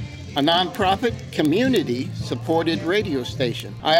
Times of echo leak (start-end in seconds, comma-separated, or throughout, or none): none